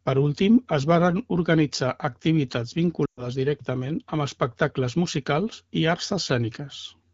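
At 3.05 to 3.27 s in this speech clip, a run of lost AMR speech frames fails the radio checksum, roughly 120 ms, which fits about six frames. The AMR-WB decoder stretches the last good pitch and vocal tract settings with falling gain, so sound drops to near silence within two frames before returning weak or rough.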